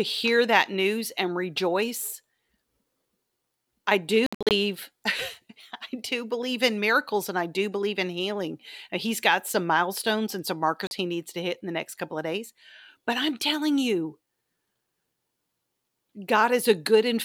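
Right after "I do", from 4.26 to 4.51 s, the speech breaks into stuttering holes: about 183 ms goes silent in short bursts over roughly 0.24 s, the longest gap 61 ms. At 10.87 s a single 41 ms gap cuts in between "some milestones and some" and "he needs to hit". Each time the speech resumes as if it had played on. This is likely a Bluetooth dropout, with audio packets arriving too late and being discarded.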